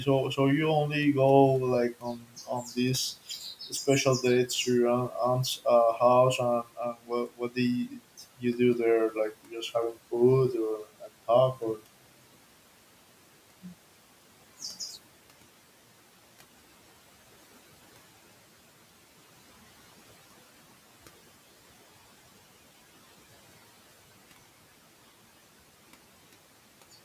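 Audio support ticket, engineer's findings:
Speech cut by the noise suppressor at 1.93–2.77 s, 7.27–7.57 s and 7.89–7.99 s. Quiet speech was mistaken for noise and pulled down about 11–13 dB. Waveform shows notched envelope dips; spectrogram shows thinned consonant energy.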